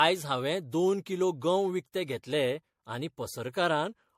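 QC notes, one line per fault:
throughout, generation loss: swirly, hollow speech, smeared attacks, nothing above 16.5 kHz; likely about five MP3 passes, worse than one 64 kbit/s encode.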